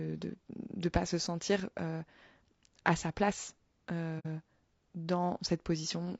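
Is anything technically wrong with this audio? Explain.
Yes, two things. Throughout, the speech sounds rough and grainy, with a hissy fill between the harmonics and a thin, synthetic top end. That's likely low-delay AAC compression (AAC-ELD) at a low rate, around 32 kbps. Its short frames can't resolve pitch harmonics cleanly, and the bit budget runs out.

Then from about 4.19 to 4.26 s there's a soft-edged dropout. That's AAC frame loss with muting, probably a couple of frames. The decoder zeroes their spectrum, and the overlapping windows fade the sound out and back in.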